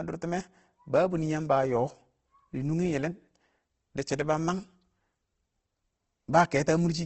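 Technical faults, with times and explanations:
Throughout: likely Opus compression. The speech sounds grainy and rough, with harmonics dissolving into noise, as band-filling music-mode coding would produce at a low bitrate around 16 kbps. On a spectrogram, energy stops sharply at 8.3 kHz, and the harmonic striations look smeared and speckled.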